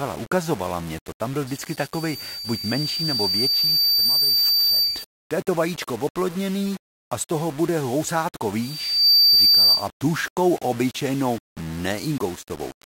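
The speech is grainy and gritty from start to finish. The grit moves with the speech, and quiet parts sputter. The noise sits roughly 20 dB below the signal. The likely cause is low bit depth without dither, with the sound pointing to around 5 bits with plain rounding.

From 1.47 to 5.21 s, a loudspeaker feedback squeal rises at 4.6 kHz. The microphone is picking up its own loudspeaker, and the loop keeps amplifying that one frequency. The squeal swells over about three seconds and ends up roughly 5 dB above the speech.

The same squeal returns from 8.61 to 9.89 s, right after "z toho bude housátko" and ending before "tuškou obyčejnou". This time it builds faster, in about half a second. It peaks roughly 10 dB above the speech.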